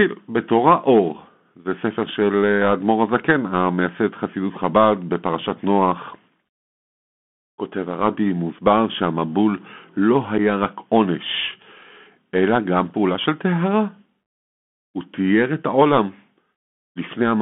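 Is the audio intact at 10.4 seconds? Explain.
No. At 10.38 s a very short hole opens in the speech: about 7.5 ms of sound drops out with abrupt edges that can click, and the level comes back briefly lower. This is unconcealed Bluetooth headset packet loss. A single voice packet between headset and phone went missing, and nothing smoothed over the gap. Silence or an idle pattern filled it, and the adaptive step in the decoder had to climb back up afterwards.

Around that moment, and throughout the clip, the Bluetooth CVSD headset codec is plainly audible. The speech sounds boxed in and narrowband, confined to roughly 200 Hz to 3.4 kHz, with a granular hiss underneath. Its s sounds are scratchy, and loud high passages distort. That sound fits a 64 kbps CVSD link. It encodes one up-or-down bit per sample with an adapting step size, and on sudden loud high-frequency sound the step cannot keep pace.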